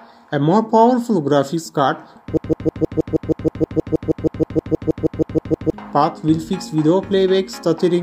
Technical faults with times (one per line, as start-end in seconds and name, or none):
2.37-5.73 broken-record loop